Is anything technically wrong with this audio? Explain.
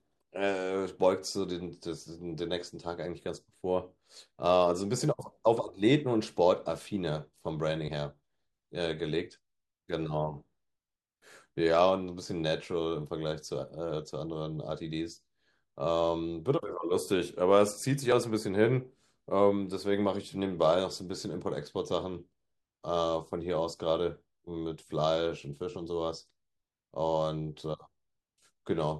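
Yes, there is one fault. At 18.12 s a dropped buffer (overrun) is heard as a jump with the speech skipping ahead by about 20 ms, likely unread samples being overwritten; no silent gap separates it from a dropout.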